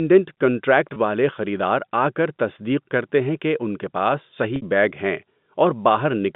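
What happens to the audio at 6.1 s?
At 6.1 s the audio is intact, with the speech carrying on through the G.711 telephone coding, whose band is limited to roughly 150 Hz to 3.6 kHz.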